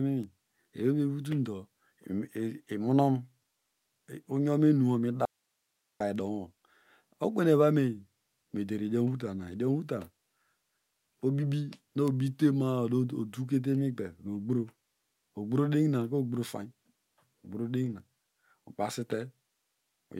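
The signal feeding the path was likely interrupted while the chain after the break stayed live, producing an audio dropout to a faint residue from 5.25 to 6.00 s: the speech cuts off abruptly for 750 ms, leaving only hiss roughly 50 dB below normal level.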